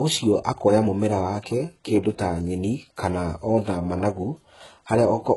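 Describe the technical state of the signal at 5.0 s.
At 5.0 s the speech still carries the heavy damage present throughout, likely from HE-AAC compression at a very low bitrate, consistent with about 12 kbps. The treble is rebuilt from copied lower bands rather than coded, ending at 11.5 kHz, so s sounds come out gritty, metallic and lispy.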